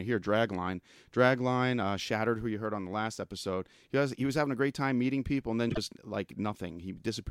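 Just after "meeting people and then", from 5.69 to 5.78 s, two neighbouring frames play in the wrong order: the frames-out-of-order fault. Each block is 26.1 ms long, which fits one codec frame apiece, so a short stretch of speech comes out with its halves swapped, heard as a brief garbled flutter. Unlike a dropout or skip, no time goes missing, and unlike a repeat, nothing is heard twice.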